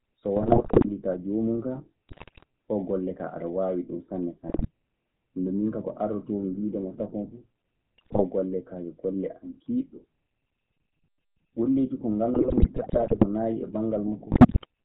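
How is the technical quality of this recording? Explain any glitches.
The speech is plainly degraded: the whole recording carries codec damage, and six separate bursts of transmission errors break it up further.

Throughout, the GSM full-rate codec is plainly audible. Nothing above 4 kHz survives, and pulse-driven excitation from a modelled vocal tract gives a buzzy, gravelly roughness, which fits a 13 kbps coder. It is steady rather than patchy, which separates it from packet loss.

GSM bit errors strike at 0.36–0.91 s, 2.09–2.44 s, 4.48–4.69 s, 7.98–8.24 s (just before "golle kaa yo golle"), 12.34–13.25 s and 14.32–14.65 s. Corrupted filter, pitch and gain values warp each frame, producing squawks, pops and gargling. Unlike clean dropouts, the sound turns wrong and often louder instead of going silent.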